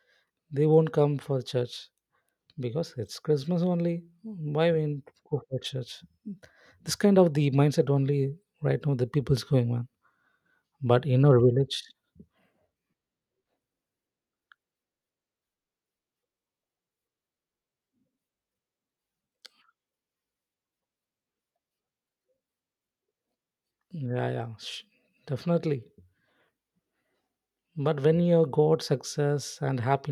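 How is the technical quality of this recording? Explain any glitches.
Listening through this speech recording, nothing stood out as a technical problem or glitch.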